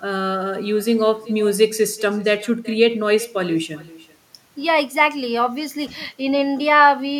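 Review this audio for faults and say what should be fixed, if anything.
Echo with no canceller runs through the whole clip: every phrase of speech is followed roughly 0.4 s later by a faint, thin copy sitting about 21 dB below the direct voice. The far end is evidently playing the call over a loudspeaker, its microphone is catching that playback, and nothing on that side subtracts it before sending it back, so the talker's own speech returns after the network round trip. Prevent it by enabling acoustic echo cancellation at the far end, or by having that participant use a headset.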